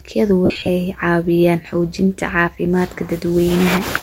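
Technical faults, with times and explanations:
0.46–0.69 s, lost LE Audio frames: just before "caawiyaan xoojinta caafimaadka" the speech breaks into a noisy, smeared patch for about 225 ms, with roughly 180 ms of it actually missing in short scattered gaps, the longest around 50 ms. Each gap is filled by the LC3 decoder replaying the last good spectrum with randomised signs, so voiced sound turns hissy and blurred rather than dropping out cleanly. The dropout pattern fits 7.5 ms frames.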